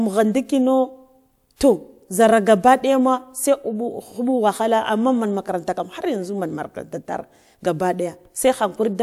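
No technical faults can be heard anywhere in the speech recording, and the signal stays steady and intact throughout.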